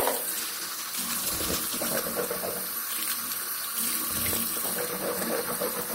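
From 0.37 to 2.65 s, a call bitrate drop from 32 to 13 kbps leaves the sound coarse and dulled, then recovers, unlike permanent band-limiting.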